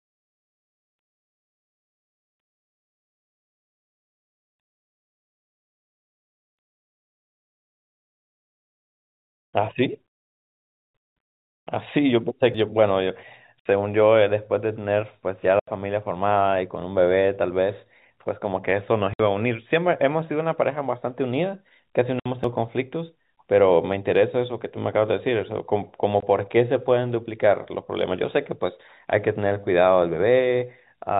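Telephone-band speech, cut off above 4 kHz as G.711 coding does, with two kinds of damage. At 12.54 s and 22.44 s a dropped buffer (overrun) leaves no silence, and the sound jumps ahead by roughly a tenth and about 0.15 of a second, likely from capture not being read before the hardware overwrote it. Packet loss filled with silence is different: hard-edged silent holes at 13.60–13.66 s, 15.60–15.68 s, 19.14–19.20 s, 22.20–22.26 s and 26.20–26.22 s, lasting 60, 80, 60, 60 and 20 ms, multiples that fit 20 ms packets.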